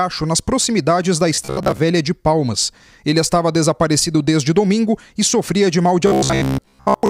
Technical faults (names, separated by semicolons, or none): robotic sound from repeated short buffers